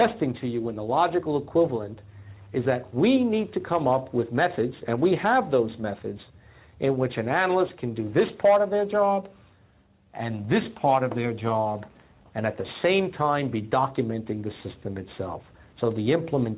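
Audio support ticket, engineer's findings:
Level swing of a few dB, whole clip; gain pumping, likely from input gain set too high with a fast limiter clamping each peak. Band-limited to 4 kHz through the call codec path, consistent with G.711 mu-law.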